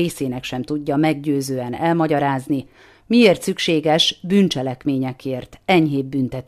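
Nothing in this speech recording stood out as a technical fault on listening.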